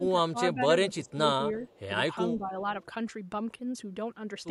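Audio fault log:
0.0–1.29 s, 1.6–1.93 s, 2.3–2.63 s: speech suppressed in double talk. Level ducks in patches, by about 15 dB at worst in the first stretch and about 10 dB later. This is likely an echo canceller attenuating the near talker while the far side is also speaking.
1.05–1.12 s and 1.63–1.8 s: echo leak. A faint delayed copy of the speech trails it by 379 ms, about 35 dB and then about 30 dB below the direct signal. This is likely loudspeaker pickup that the far end's echo canceller did not fully remove.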